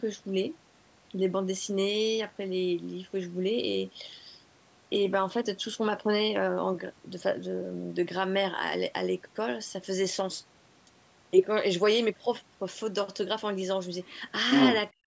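A speech recording from a call, with faults clustered in its last second. The echo canceller likely failed to strip the far end's loudspeaker sound out of the microphone signal. The result is the other side's voice leaking through: a faint scrap from 14.03 to 14.19 s, sitting roughly 30 dB under the talker, then a much stronger burst from 14.51 to 14.81 s, slightly louder than the talker at about 5 dB above. From 14.91 s to the end at 15.06 s, both sides were talking at once, and the canceller likely could not tell the local voice from the echo, so it turned everything down. This is speech suppressed in double talk. The talker's voice drops by as much as about 40 dB over roughly 150 ms and is nearly cut out. Throughout, the call's microphone processing leaves nothing above 8 kHz.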